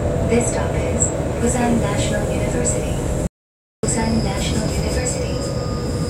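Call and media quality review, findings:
Audio dropout to silence, 3.27–3.83 s: input likely lost upstream, with the recorder still writing silence. Sound cuts to total silence for 0.56 s, with no room tone and the content gone.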